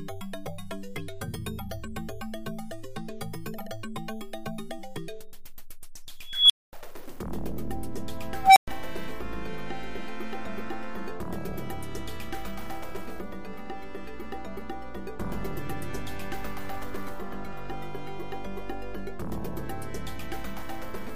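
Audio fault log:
6.26–6.73 s and 8.41–8.68 s, unstable filter. A tone near 3 kHz, then one near 700 Hz, swells into a loud squeal over 234 ms and 147 ms. It clips, then drops to silence for 232 ms and 116 ms. A recursive filter runs away, overflows, and resets.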